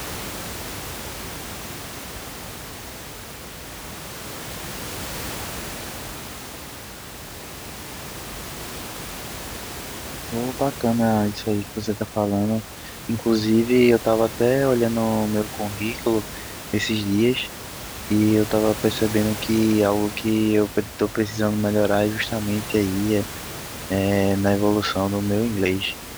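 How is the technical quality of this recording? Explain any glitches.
Nothing in this speech recording glitches or breaks up, and the only thing in the background is some ordinary room noise sitting about 14 dB below the talking.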